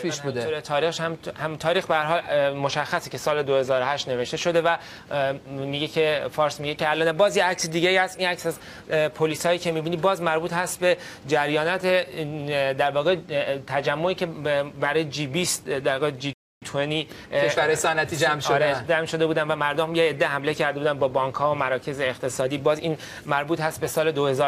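At 16.33 s the player likely ran short of data and stalled, so the audio drops to silence for about 0.28 s until 16.62 s.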